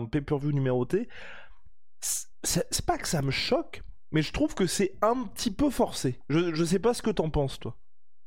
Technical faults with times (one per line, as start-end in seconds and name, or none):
0.42-8.26 DC step